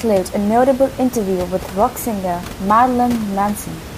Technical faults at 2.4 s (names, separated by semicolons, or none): none